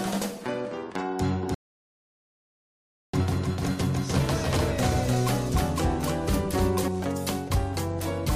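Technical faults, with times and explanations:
1.43 to 6.88 s, doubled audio track: a second full-band copy runs about 0.3 s behind at roughly equal level, likely from the audio being captured twice. Unlike an echo or reverb, it has no decay or room colour and starts and stops abruptly.
1.54 to 3.14 s, rebuffering stall: the sound cuts to silence for 1.59 s while the player waits for more data, then resumes exactly where it stopped. Unlike a dropout, nothing is skipped; the pause only adds time.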